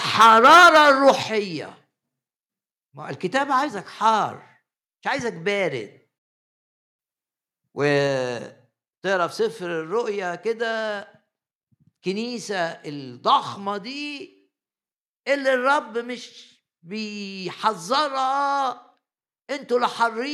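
From 0.19 to 1.11 s the speech has a harsh, crackling edge on its loudest syllables. This is microphone overload. The input was likely set too high, driving peaks about 9 dB past the converter's limit. Their tops are sliced flat, and roughly a tenth of the samples in this stretch were clipped at the converter's limit. The flattened waveforms add buzzy distortion that rides on each strong syllable.

At 0.22 s the voice and background drop together by about 2 dB, in one sudden step. At 1.23 s they drop again, this time by about 6 dB. Both are a microphone volume step-down. The call software likely reacted to the clipping by cutting the device's input volume. Each cut is abrupt rather than gradual. The second, larger step comes just after the distorted stretch ends, leaving the speech noticeably quieter from there.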